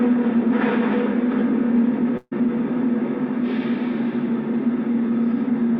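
A short recording of sounds with one burst of packet loss, from 2.17 to 2.33 s. A run of packets never arrived in time, so the receiver covered the hole by stretching out the last bit of sound it had, about 140 ms of it, fading as it went, then a brief 10 ms drop to silence. When the audio picks up again, 140 ms of the real material is simply gone, so things jump ahead slightly.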